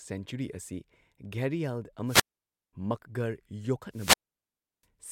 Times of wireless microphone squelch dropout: 2.05-2.73, 3.91-4.86

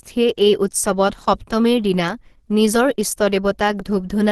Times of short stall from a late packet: none

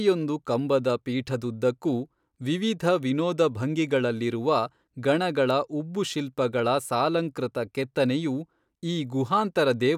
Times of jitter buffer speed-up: none

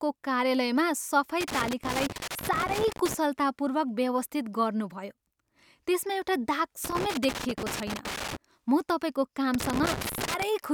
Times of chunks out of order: none

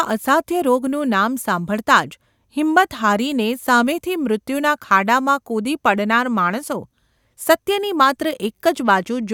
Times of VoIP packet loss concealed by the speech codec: none

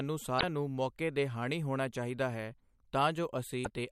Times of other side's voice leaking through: none

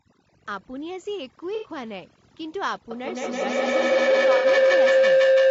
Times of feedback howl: 2.91-5.50

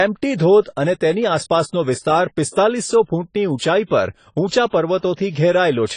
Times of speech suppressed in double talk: none

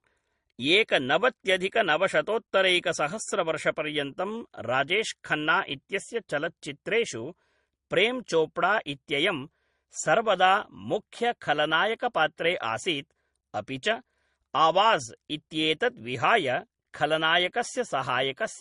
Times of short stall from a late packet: none

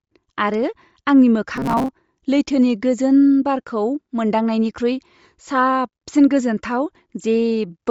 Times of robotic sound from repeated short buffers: 1.56-1.89

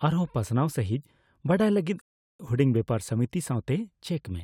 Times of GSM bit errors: none

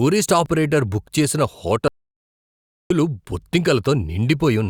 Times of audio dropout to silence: 1.88-2.90

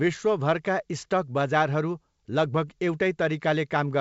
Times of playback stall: none

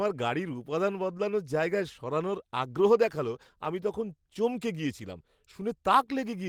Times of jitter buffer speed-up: none

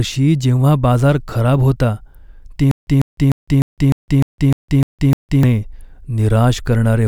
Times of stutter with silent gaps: 2.71-5.43

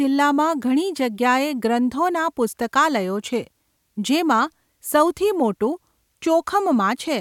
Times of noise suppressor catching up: none

